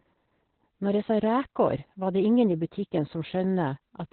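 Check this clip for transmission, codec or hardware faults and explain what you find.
There's one fault, and it runs the whole way through: Opus voice compression. Nothing comes through above about 4.2 kHz, so the speech sounds muffled and phone-like, with a hoarse, slightly robotic edge. That's the SILK coder squeezed down to narrowband with coarsely coded excitation, which fits a bitrate around 8 kbps.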